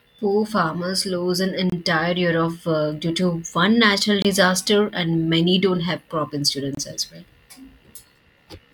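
At 1.70, 4.22 and 6.75 s the speech breaks into a gap between chunks: 25 ms holes, repeating every 2.5 s of audio. Unlike a dropout, nothing is missing; the speech simply resumes late after each join.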